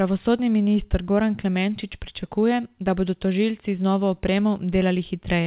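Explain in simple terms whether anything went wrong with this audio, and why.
Nothing went wrong with this speech recording, and there is no moment where a problem can be heard. It travelled over an ordinary phone-style call connection, so it sounds a bit narrow, with nothing above 4 kHz, which is simply how such calls sound.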